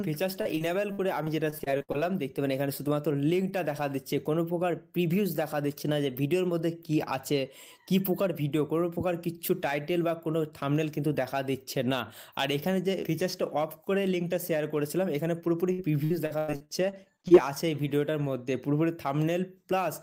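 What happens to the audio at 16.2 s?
At 16.2 s the sound sits inside a burst of repeated packet loss (robotic sound), running from 15.72 to 17.32 s. Data keeps arriving late or not at all. Each hole is papered over by stretching the last bit of sound, and another hole follows soon after. The holes come about ten times, the longest near 97 ms. About 29% of the stretch is patched. The result is choppy, with pieces missing.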